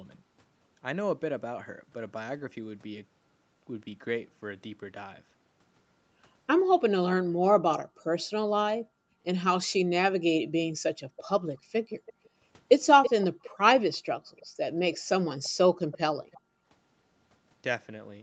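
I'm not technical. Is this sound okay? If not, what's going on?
No. Two things go wrong on this call recording.

The first is background gated by the echo canceller. While the far side's audio was playing through a loudspeaker, the call's echo canceller clamped the microphone down hard to keep that audio from coming back. The room sound behind the speech dips to near silence in short bursts, then springs back. You can hear this in four stretches: 7.23 to 9.23 s, 10.67 to 12.33 s, 13.4 to 15.09 s, and briefly at 16.43 to 16.66 s.

The second is an echo leak, from 11.16 to 16.41 s. Here the echo canceller likely failed to strip out everything the microphone picked up from a loudspeaker, so part of it was sent back down the line. The result is a faint, delayed copy of the speech trailing about a third of a second behind the original, well below the main speech, as though someone were quietly repeating it from across the room.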